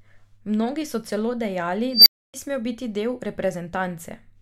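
At 1.93 s an unstable filter takes over the speech. A tone around 5 kHz swells into a loud squeal over about 133 ms and clips. The recursive filter's coefficients were bad, so its output grew unchecked. Then the numbers overflow. The sound drops out for about 279 ms until 2.34 s.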